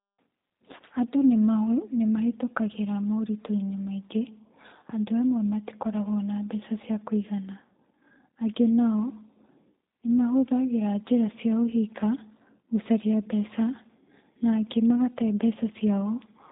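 From start to end the speech carries plainly audible G.729 codec damage. Each 10 ms frame is rebuilt from a vocal tract filter, a pitch predictor and a few pulses, which fits an 8 kbit/s G.729A stream. Nothing above 3.8 kHz survives, and the result sounds rough and synthetic.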